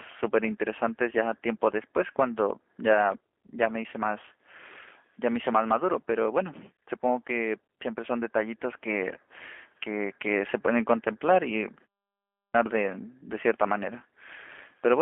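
From the first second to the end, the speech carries G.729 codec damage. The band is confined to telephone limits, roughly 250 Hz to 3.4 kHz, so it sounds thin and boxed-in. Within that band, voiced sounds take on a rough, buzzy, slightly synthetic texture. That texture comes from rebuilding speech out of a vocal-tract filter, a pitch predictor and a few pulses per short frame, which fits an 8 kbit/s G.729A stream. Band-limiting alone would sound muffled but smooth. The grainy, artificial edge is what marks this as a low-rate speech codec.

At 12.14 s, after a pause of about 0.35 s, the next phrase is a clipped start after a pause. Roughly 0.4 s of its opening is gone, through 12.54 s, and the speech bursts in mid-sound with its first syllables missing. The output path went idle in the gap and did not wake in time. This differs from muted pauses, where the background drops to silence between phrases but returns before the next one, so nothing spoken is lost.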